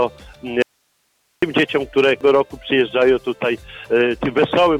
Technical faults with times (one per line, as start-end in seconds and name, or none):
0.62-1.42 audio dropout to a faint residue
2.21 damaged data in a compressed stream